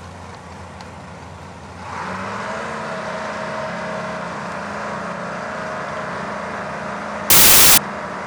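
From 7.30 to 7.78 s, close to half a second, the audio turns to noise because the samples are built from the wrong bytes. The reader joins each sample's bytes wrongly, through a one-byte offset, swapped byte order or a wrong alignment, so the rapidly changing low bits end up as the large part of each value. Unlike hiss mixed under intact audio, the noise replaces the sound outright and starts and stops abruptly at those times.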